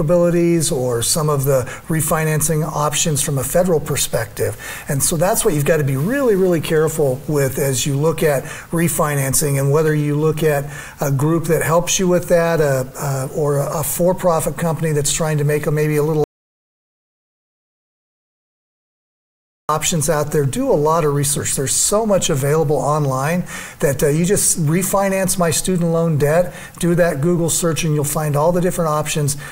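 At 16.24 s the input signal is lost and the recording keeps running on silence until 19.69 s, an audio dropout to silence lasting about 3.45 s. The likely cause is the source being cut off upstream, through a disconnected device, a failed link or a stray mute, while the writer carried on. The sound stops abruptly mid-flow, the gap holds no room tone at all, and it resumes just as suddenly, with everything in between lost.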